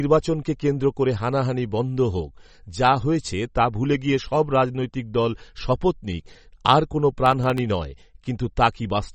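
All the way through, the speech sounds watery and a bit swirly, and there's nothing above 8.4 kHz, so the top end is sliced off flat. That's likely MP3 compression at a low bitrate, something like 32 kbps, where weak detail gets dropped and flickers frame to frame.

From 7.26 to 7.58 s there's a short burst of gritty crackle riding on the speech. That's processor overload crackle: a handful of very short buffers, well under a millisecond each, weren't finished in time and went out as tiny silent gaps with hard edges.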